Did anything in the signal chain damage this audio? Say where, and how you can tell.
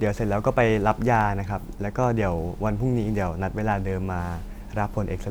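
Yes. There is a block size mismatch (truncated) at the driver or buffer stage, throughout the speech. A steady buzz at about 92 Hz marks the block rate where the tail of each block is discarded. Pacing stays at 1.0 times, so the size difference is negligible.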